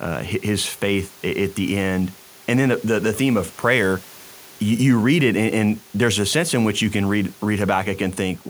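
No technical faults are audible.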